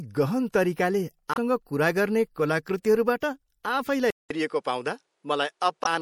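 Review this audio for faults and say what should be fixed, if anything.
MP3 compression runs through the whole speech clip. The sibilants sound watery and swirly, and the consonant attacks are smeared. The likely cause is an encoder short of bits, at a rate that fits about 64 kbps, zeroing weak frequency lines frame by frame. Unlike a bandwidth drop, this swirl is present from the first second. Encode at a higher bitrate or keep an uncompressed master.

Damaged data in a compressed stream produces a short glitch from 1.32 to 1.37 s, just before "कुरा गर्ने कलाकृतिहरूबाट", and another at 5.82 to 5.87 s. The decoder misreads corrupted frames, loses sync and resumes at the next header. Verify file integrity with checksums and use error-checked transfer.

At 4.10 s the input is switched to a poorer device. There is a 200 ms silence, and then nothing is heard above 11.4 kHz until the end. A faint new background noise appears well below the speech, and the loudness stays about the same. 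A different microphone or headset profile taking over is the probable cause. Unlike codec damage, the tone changes abruptly at one point and stays changed. Lock the recording device so the system cannot switch inputs automatically.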